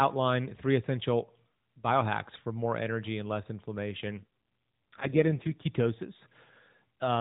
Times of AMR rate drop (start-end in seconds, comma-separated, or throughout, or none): 4.18-5.67